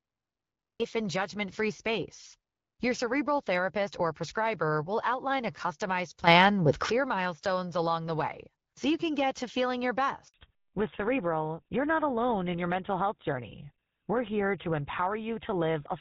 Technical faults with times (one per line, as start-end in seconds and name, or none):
0.00-0.80 cut-off start
6.27-6.91 sudden gain jump
10.28-10.34 handover gap
10.34-16.01 fallback to narrowband